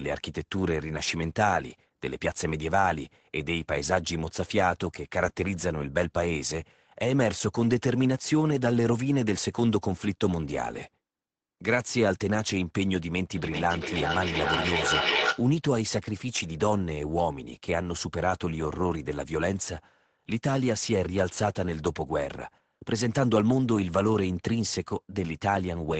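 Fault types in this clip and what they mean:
Feedback echo between two devices: two devices in the same room are joined to one call, and one is playing back what the other's microphone sent, so that microphone hears it again and each device's echo canceller removes only its own playback. From 13.37 to 15.51 s the speech comes back at intervals of roughly 0.4 s, thinner and more ringing each time, and the loudest repeat reaches about -1 dB relative to the speech itself.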